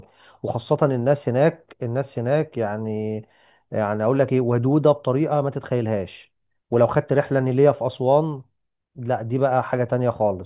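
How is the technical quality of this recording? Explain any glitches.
No glitches or technical faults can be heard here.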